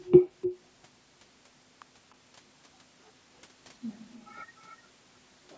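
At 0.05 to 0.12 s and again at 0.41 to 0.57 s, a faint delayed copy of the speech trails the direct signal by roughly 0.3 s. This is an echo leak, likely from a far end on loudspeaker whose echo canceller let part of the returned signal through. It sits about 20 dB below the speech in the first scrap and rises to about 15 dB below in the second, audible as a short-lived doubling.

At 1.82 s a single sharp snap lands on top of the sound. It is an electrical switching spike, likely a nearby switch or static discharge arcing briefly and coupling into the audio line. It lasts only a couple of milliseconds and has no connection to the speech itself.

From 4.68 to 4.76 s the same echo leak returns with the same 0.3 s delay, now much weaker at about 35 dB below the speech, a faint trailing copy.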